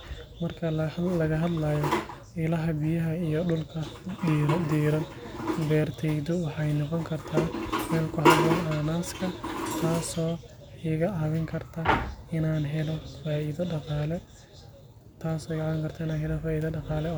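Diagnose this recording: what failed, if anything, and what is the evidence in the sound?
Nothing failed: no stage in the chain leaves audible evidence of a fault anywhere in the speech.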